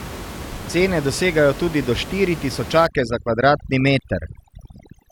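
Overdone noise removal from 2.87 s to the end: an over-aggressive noise reducer pulls bands near its noise estimate to nothing, leaving twinkling specks where room noise, about 13 dB below speech, sat.

Overlap between stream segments at 4.0 s: two segments claim the same moment, so the player trims sound that was never duplicated, and a tiny click or skip marks the join.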